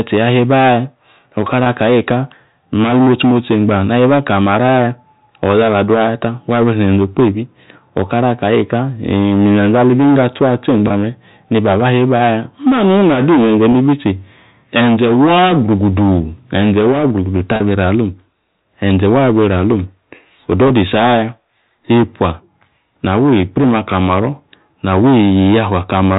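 It's speech over what sounds like a telephone-band G.711 line, and the damage is packet loss with pitch repetition at 1.64, 10.88, 13.72, 17.56 and 20.68 s. Each gap is about 20 ms, except 17.56 s at about 40 ms. The receiver fills each gap by repeating the last pitch period, so you hear a brief held, buzzy note.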